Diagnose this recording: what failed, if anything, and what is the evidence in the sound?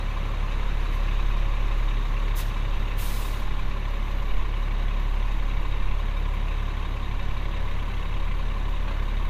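Nothing failed: no stage in the chain leaves any audible evidence of a fault anywhere in this recording of everyday sounds.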